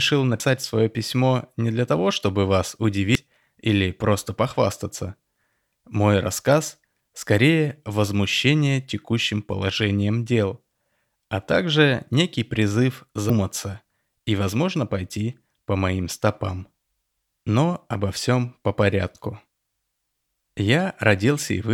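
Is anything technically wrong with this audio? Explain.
Yes. There is damaged data in the compressed stream, heard three times in this speech. Brief glitches occur at 0.40 s, before "свое письмо не для"; at 3.15 s, between "для того чтобы вас" and "или просто похвастаться"; and at 13.30 s, after "а также некий призыв". Corrupted bytes make the decoder misread a frame, lose sync and skip ahead to the next header.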